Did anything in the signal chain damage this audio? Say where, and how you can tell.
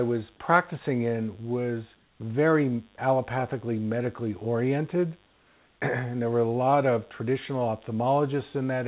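Yes. A mains buzz runs through the whole clip at a level roughly 35 dB below the speech. It comes from the analogue wiring stage, likely through a dimmer, rectifier or missing shield that lets sharp switching spikes into the signal twice per cycle. The buzz sits on a 50 Hz fundamental with a dense stack of harmonics, which is why it sounds raspy rather than like a smooth hum. Those harmonics stop at 4 kHz along with everything else, because the narrowband call path cuts off there.

Comfort noise replaces the background twice: from 1.96 to 2.2 s (240 ms) and from 5.26 to 5.8 s (540 ms). This happens at the call processing stage. The background loses its texture and becomes a flat, featureless hiss, about 2 dB and about 3 dB quieter respectively. This points to discontinuous transmission, where the receiver synthesises noise while the sender is silent. Unlike a dropout, no speech is lost here, only the real room sound.

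Sound dropped by the voice detector occurs at 2.96 to 2.98 s, also in call processing. About 10 ms of speech vanishes under 20 ms of steady synthetic noise, which means the detector likely misread a quiet moment as background and stopped sending. It differs from packet-loss concealment because nothing is repeated or smeared. The gap is filled with steady noise, and the speech returns once the detector triggers again.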